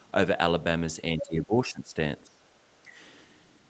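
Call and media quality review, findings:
Speech suppressed in double talk: talker level pumps down at 1.17–1.97 s (roughly 15 dB at deepest), 2.23–2.43 s (around 25 dB) and 2.83–2.93 s (around 10 dB). Likely echo canceller/suppressor ducking near-end during far-end activity. Unlike packet loss, these are gain reductions by the suppressor, not lost packets.

Other side's voice leaking through: a brief second voice at 1.18–1.27 s, roughly 10 dB under the talker, coinciding with the start of the first suppression. Likely residual loudspeaker echo that the canceller did not remove. Unlike crosstalk, it is short and fragmentary and tied to the double-talk onset.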